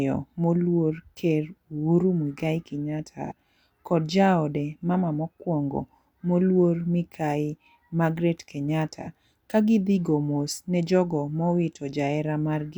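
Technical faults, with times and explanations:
3.25–3.32 s and 9.01–9.07 s, AAC frame loss with concealment. Each time a brief smeared, noisy patch replaces the sound. It comes just before "kod jaode mama mokwongo" and again before "ka gidhi go mos". About 43 ms of data is missing each time, which fits a single lost frame. The decoder filled the gap by rebuilding the last good spectrum with scrambled detail. The patch is too short to fade into silence.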